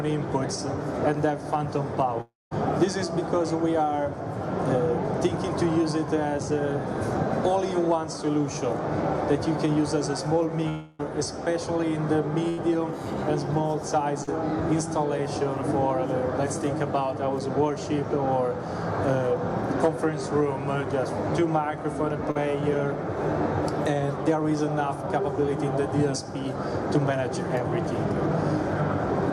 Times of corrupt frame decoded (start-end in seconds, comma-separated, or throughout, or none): none